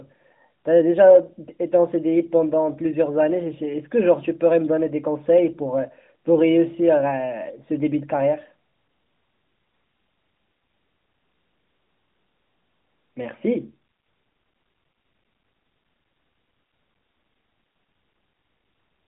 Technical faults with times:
none

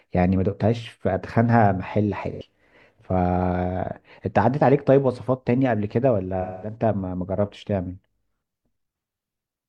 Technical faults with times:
2.31-2.41 AAC frame loss with concealment
6.41-6.76 AAC frame loss with concealment

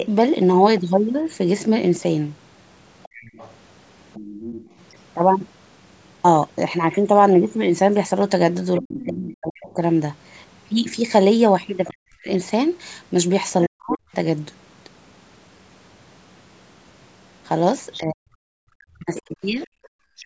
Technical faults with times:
3.03-4.81 other side's voice leaking through
8.77-13.96 other side's voice leaking through
8.79-14.09 speech suppressed in double talk
17.92-20.20 other side's voice leaking through
17.98-20.26 speech suppressed in double talk
19.73-19.92 background gated by the echo canceller

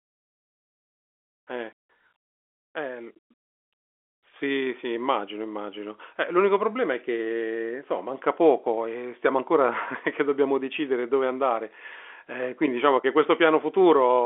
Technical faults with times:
none

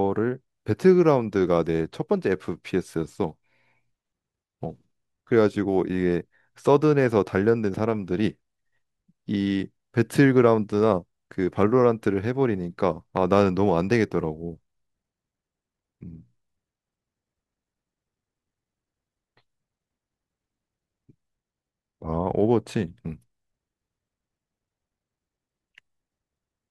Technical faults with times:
13.17-13.19 loud pop

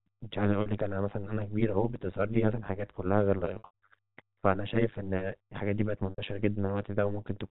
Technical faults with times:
0.00-7.50 overlap-add ripple
0.62-0.66 packet loss with pitch repetition
3.48-3.88 packet loss with pitch repetition
6.10-6.18 packet loss with pitch repetition

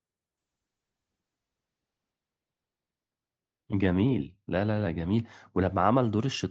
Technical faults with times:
0.42-6.50 call bitrate drop

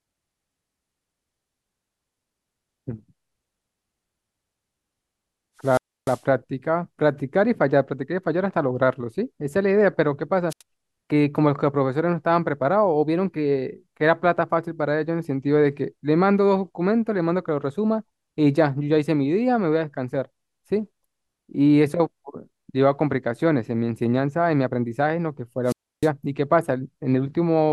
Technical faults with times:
5.60-6.25 wireless microphone squelch dropout
10.49-10.62 wireless microphone squelch dropout
25.64-26.10 wireless microphone squelch dropout

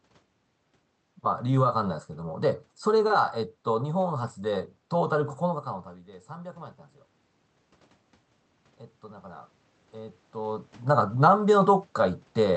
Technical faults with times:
9.02-10.72 automatic gain rising

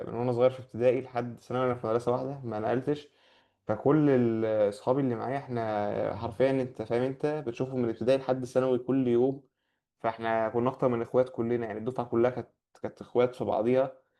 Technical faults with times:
none

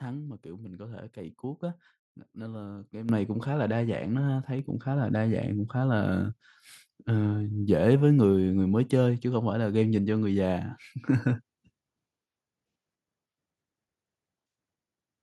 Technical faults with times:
3.09 microphone volume stepped up

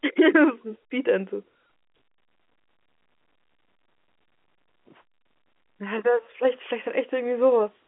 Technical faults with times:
none

